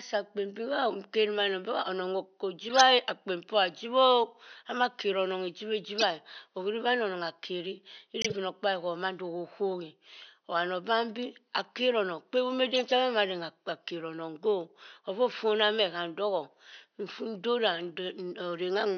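At 2.69 to 2.81 s, just before "akpen poh", a corrupt frame decoded gives a loud glitch, peaking near -10 dBFS: damaged compressed frames were played anyway, so misread gains and codes put energy at wrong frequencies. Similar glitches follow at 5.98 to 6.03 s, 8.21 to 8.36 s, 12.74 to 12.92 s, and a faint one at 15.30 to 15.34 s. A spectrogram shows short broadband or misplaced blocks; the waveform shows spiky bursts above faint room noise.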